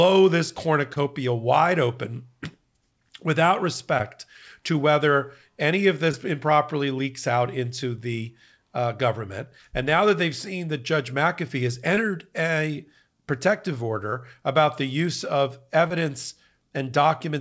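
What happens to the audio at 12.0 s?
A brief smear or wobble at 11.95–11.99 s: short concealed packet loss, where the receiver filled about 15 ms of the 20 ms of missing audio by extending the preceding sound.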